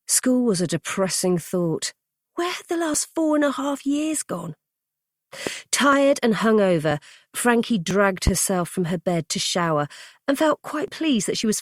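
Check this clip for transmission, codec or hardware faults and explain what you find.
Two faults are audible: skips from overlapping stream segments, and two loud pops.

Overlap between stream segments at 2.94, 5.93, 6.91, 7.91, 8.89 and 10.88 s: overlapping 1.0 s segments get trimmed, deleting 5 to 15 milliseconds, so the waveform steps abruptly. Each is heard as a tiny skip and shows as a thin vertical line on a spectrogram.

Loud pop at 5.47–5.50 s (about 10 dB above the sound) and 8.27–8.30 s (about 15 dB): a single sharp pop over the continuing audio, likely from a voltage spike. Each appears as a tall spike on the waveform and a broadband vertical stripe on a spectrogram.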